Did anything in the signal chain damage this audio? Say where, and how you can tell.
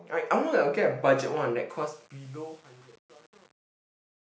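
Yes. The damage sits at a sample-format conversion or gain stage: truncation distortion on the fade-out. From 1.70 s the fade turns gritty, and from 1.8 s to the end at 4.24 s it is at its worst. The stage kept too few bits and added no dither, which fits an 8-bit word. On the waveform the tail becomes stair-stepped square blocks. A spectrogram shows broadband grainy hash in place of a clean taper.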